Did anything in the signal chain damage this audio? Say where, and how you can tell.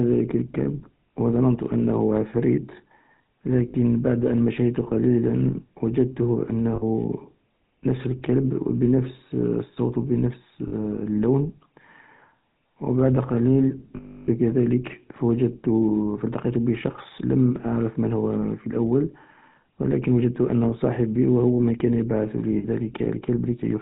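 Yes. The codec stage damaged the whole clip. This speech went through the GSM full-rate codec at 13 kbps, and the damage is plainly audible. The codec models the vocal tract and drives that model with a regularly spaced pulse train, keeping only one excitation sample in three. That pulse excitation gives the voice its buzzy, gravelly grain. Because the codec passes nothing above 4 kHz, the sibilants and upper detail sound dull.

The network stage lost GSM frames, and you can hear a rough, metallic ring wherever the decoder filled a gap by repeating the last good frame. This happens for about 60 ms at 3.68 to 3.75 s, just before "بعد أن مشيت قليلا", and again for about 60 ms at 6.76 to 6.83 s. It lasts about 40 ms at 10.68 to 10.73 s. The longest gap runs about 0.32 s, from 13.96 to 14.29 s, right after "و بعد قليل". The last loss, about 60 ms at 22.58 to 22.65 s, follows "هو من كان يبعث".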